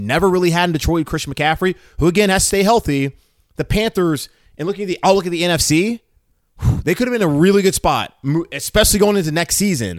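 At 7.05 s the speech drops abruptly by about 4 dB and stays down until 7.21 s. This is a sudden gain jump, likely from a digital gain setting changed between one sample and the next with no ramp. The background noise falls by the same amount at the same instant, which separates it from a compressor or a natural drop in loudness, where the level glides and the noise floor stays put.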